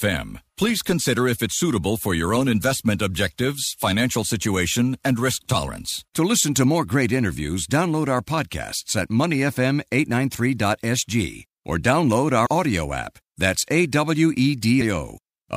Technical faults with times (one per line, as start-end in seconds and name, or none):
12.45-12.47 compressed frames skipped